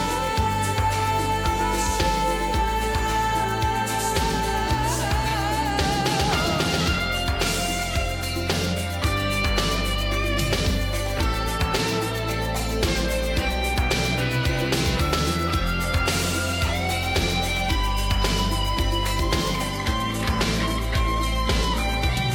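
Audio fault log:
19.71–22.34 s: adaptive stream at a lower bitrate. Quality drops suddenly, with no gap. Nothing remains above 14.9 kHz and codec artefacts rise, fitting a low-bitrate HE-AAC stream.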